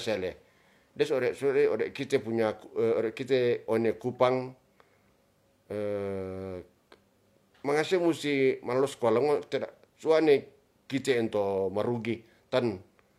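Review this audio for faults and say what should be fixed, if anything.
Nothing in the signal needs fixing: the speech recording holds steady throughout with no technical faults to report.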